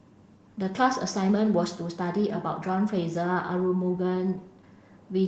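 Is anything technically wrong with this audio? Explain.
No, nothing is technically wrong with this audio.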